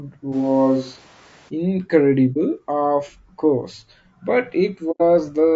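Throughout, the speech is rough and grainy, with noise filling the gaps between harmonics and a thin, somewhat synthetic top band. That is likely low-delay AAC compression such as AAC-ELD, whose short frames resolve pitch poorly; the damage is plainly audible and suggests a low bitrate near 32 kbps.

From 0.34 to 1.48 s, the close microphone apparently drops out and the recording switches to a distant microphone, likely one further from the talker. The voice turns abruptly roomy and hollow, with weaker bass and room noise roughly 30 dB below the speech, though the level stays about the same. It returns just as suddenly.

Two episodes of AAC frame loss with muting follow, where the decoder zeroes missing frames and the overlapping windows fade the sound out and back in. At 2.33 s a 30 ms brief dip, consistent with one lost frame, sits just before "of course but". At 4.91 s, just after "of course but", a longer 90 ms gap, fitting about three lost frames, opens.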